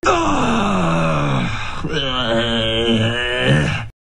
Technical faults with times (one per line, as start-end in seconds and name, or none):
none